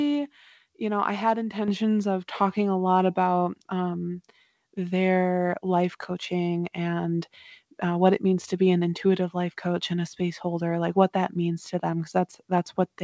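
Speech that's gone through a call path, so there's nothing above 8 kHz, which fits a wideband codec like G.722. At 1.68 s you get a microphone volume step-up: the call software decided the mic was too quiet and bumped the input gain by about 7 dB in one go, so the voice and the room noise behind it jump up together.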